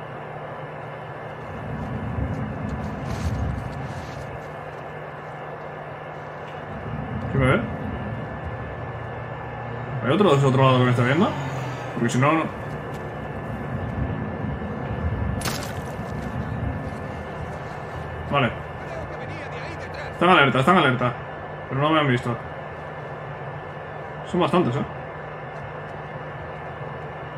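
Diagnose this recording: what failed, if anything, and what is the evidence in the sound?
Nothing failed at any stage of the chain, and no part of the recording gives evidence of a fault. The sound holds steady throughout, with nothing that calls for a diagnosis.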